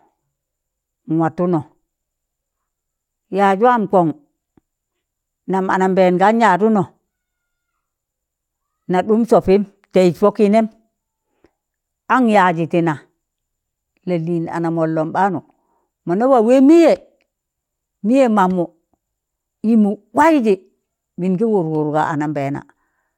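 No technical faults can be heard anywhere in this speech recording. There is nothing to place on a timeline.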